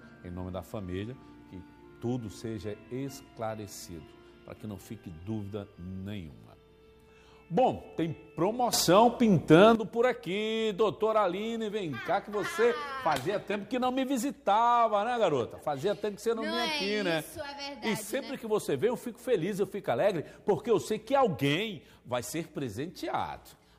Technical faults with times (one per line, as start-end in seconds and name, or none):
8.73-9.75 sudden gain jump